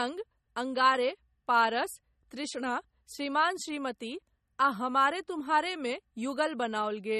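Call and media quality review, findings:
MP3 compression, throughout the speech: watery, swirly texture; s sounds metallic and chirpy; consonant attacks smeared. Likely cause is an MP3 encode starved of bits, consistent with roughly 32 kbps. Spectrogram: hard ceiling at 13.2 kHz, with isolated spectral blocks flickering on and off frame to frame. Waveform: softened onsets.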